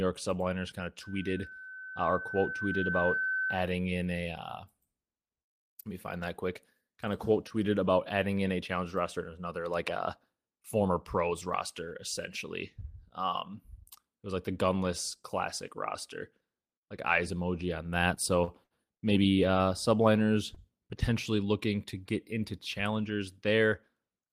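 From 1.01 to 3.76 s, after "kind of", a microphone picked up the loudspeaker it was feeding, and the loop gain passed one at 1.5 kHz. This loudspeaker feedback squeal swells over about two seconds into a steady tone roughly as loud as the speech, ending before "in a".

Between 18.15 and 19.03 s, after "like eyes emoji on", packets kept arriving late, so the jitter buffer repeatedly ran dry. The receiver held the last sound through four short gaps, the longest 66 ms, totalling 148 ms. These repeated stalls make the speech stutter and drag until "maybe uh".

At 20.55 s a single packet came late, and the jitter buffer emptied for a moment. The receiver stretched the preceding sound by 17 ms and then resumed where it left off. This short stall from a late packet holds one sound slightly too long, with a faint buzz or dip.

From 20.63 to 21.46 s the jitter buffer held more audio than it needed. 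To shed the excess, the receiver trimmed about 50 ms in small pitch-period pieces. This jitter buffer speed-up runs the speech about 5% fast at unchanged pitch, hurried up to "to get".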